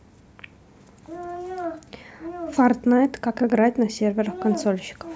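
No technical faults are audible anywhere in the speech.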